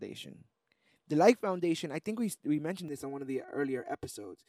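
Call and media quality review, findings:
Channel delay (comb filtering) from 2.88 s to 4.48 s. Speech turns hollow and phasey. One channel lags about 3 ms before mono summing. Common content cancels at evenly spaced notches, the first near 200 Hz. Check stereo alignment or the downmix stage.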